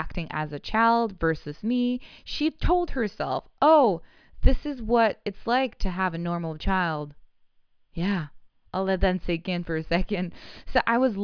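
No technical faults are audible anywhere in the speech recording.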